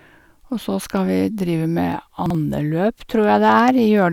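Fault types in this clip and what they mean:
Chunks out of order: Around 2.26 to 2.35 s, one short block of the speech, about 43 ms long, turns up one slot late and plays after the block that should follow it. Nothing goes missing, but that tiny stretch comes out scrambled, with three hard splices at the joins.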